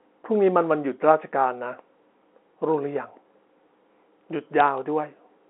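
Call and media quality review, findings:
Sharp click at 4.60 s, over unchanged speech. Bit errors on a digital phone line, likely. Flipped bits in the G.711 mu-law stream corrupt single samples on a sign or high bit. Sparse errors, about 0.07 % of bits.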